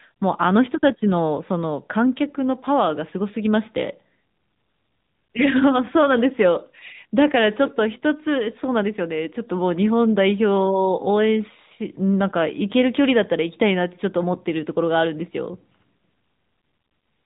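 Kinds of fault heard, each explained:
AMR narrowband mobile codec: The speech has been squeezed through the mobile-phone coder, which rebuilds the voice from a vocal-tract model and a sparse pulse excitation in short frames. The damage is plainly audible, a buzzy, synthetic edge consistent with a mid-rate mode near 10.2 kbps. On a spectrogram everything stops at a flat ceiling of 4 kHz, pointing to 8 kHz sampling, and harmonics look smeared and blocky in 20 ms steps. The waveform keeps its envelope but loses fine detail.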